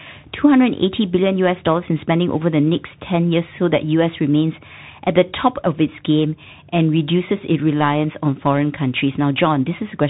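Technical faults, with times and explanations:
Throughout, Bluetooth CVSD headset codec: the speech is squeezed into a narrowband link, with nothing above 3.8 kHz. It sounds like a 64 kbps one-bit up/down delta stream whose adaptive step can't keep pace with fast loud detail, so sibilants turn gritty and a grainy hiss sits underneath.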